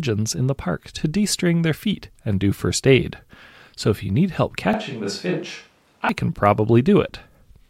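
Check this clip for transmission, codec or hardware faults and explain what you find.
One hardware-side fault is present: a switch to a distant microphone between 4.73 and 6.09 s, starting right after "if you need help". The close microphone's feed was likely lost or dropped from the mix, leaving only a pickup much farther from the talker. The speech abruptly turns roomy and hollow, thins out in the bass, and falls by around 5 dB, while background noise rises to roughly 35 dB below the speech. At 6.09 s the close sound returns just as suddenly.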